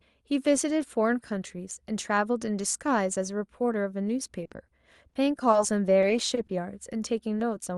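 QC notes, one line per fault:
4.43–5.55 s, repeated packet loss (robotic sound): eight dropouts, none longer than 20 ms, about 100 ms missing in all, each patched by extending the preceding sound. The rapid patches make the speech choppy. A spectrogram shows repeated smeared harmonic slices, and the waveform shows brief looped segments.
6.01–6.05 s and 6.47–6.51 s, short concealed packet loss: each time, 20 ms of audio never arrived. The receiver continued the last sound and then blended back, leaving a brief smear or wobble. A spectrogram shows a thin band of stretched harmonics or diffuse noise, and the waveform shows a short repeated cycle.
6.35–6.39 s, short stall from a late packet: the jitter buffer ran dry, so the last sound was stretched 20 ms until the packet arrived. Nothing is missing, but the sound is held slightly long with a faint buzz or dip. A spectrogram shows a horizontally elongated frame, and the waveform shows a 20 ms periodic repeat.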